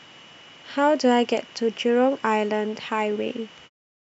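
Nothing goes wrong in this bit of speech; the only change in level is a gentle editor's fade-out that begins around 3.5 s and is done by 3.7 s, with no click at the end.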